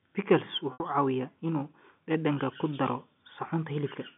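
At 0.73 s the speech drops out for 70 ms, to 0.80 s, a packet loss with pitch repetition. The receiver bridges the gap by replaying the last pitch period of the sound before it, so the start is briefly held and buzzy. Because the gap outlasts the roughly 50 ms fade, that repeated cycle dies away towards silence before the speech cross-fades back in. The length points to several consecutive packets lost, consistent with seven 10 ms frames. The G.711 A-law telephone band, about 150 Hz to 3.5 kHz, carries through unchanged around it.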